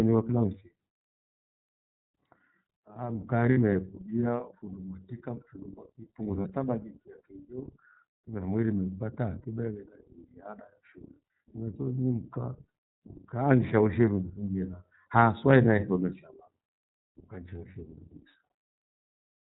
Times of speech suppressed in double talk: none

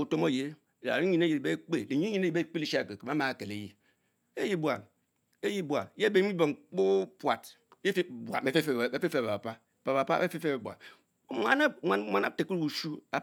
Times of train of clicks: none

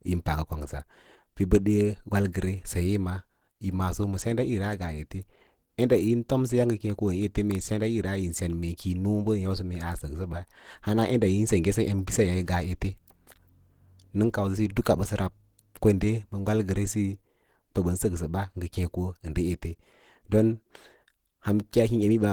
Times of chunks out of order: none

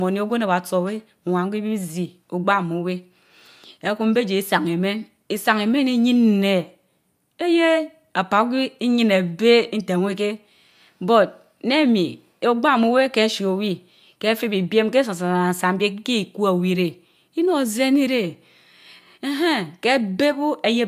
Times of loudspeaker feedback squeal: none

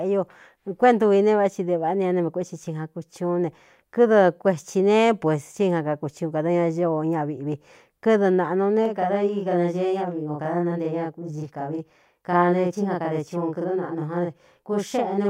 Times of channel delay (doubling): 8.85-15.29

